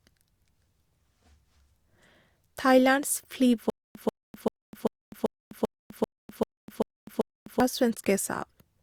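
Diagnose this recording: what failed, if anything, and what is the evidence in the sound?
A stutter with silent gaps runs through the speech from 3.70 s to 7.60 s. A short fragment of about 139 ms plays, then about 252 ms of dead digital silence follows, and the cycle repeats every 390 ms, ten times in all. That steady rhythm points to a stalled player or stream, most likely at the playback stage. Each retry replays the last buffered chunk and then runs dry, and whatever should have played through that stretch is gone.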